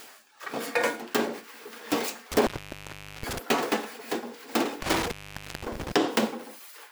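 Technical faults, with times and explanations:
2.32–3.38 s and 4.82–5.92 s, intermittent contact: a loose cable or plug opened twice, for about 0.76 s and 0.51 s. The sound cuts out each time, with crackle as the contact breaks and remakes, leaving faint hiss while the line is open.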